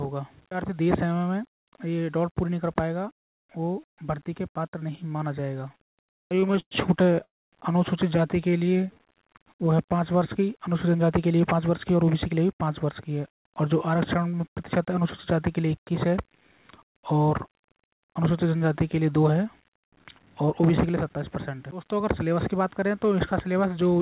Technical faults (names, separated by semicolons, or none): low bit depth without dither; repeated stalls (stutter); call audio freeze; jitter buffer slow-down; jitter buffer speed-up